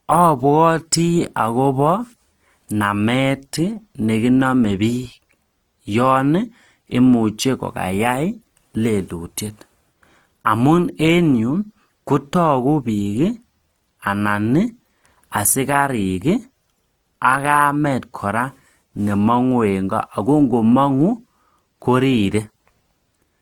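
A speech recording with plainly audible Opus compression throughout, likely from CELT music mode at roughly 24 kbps. Voiced tones sound grainy and rough rather than swirly. On a spectrogram, bands stay filled but the harmonics look noisy and smeared, with nothing above 20.2 kHz.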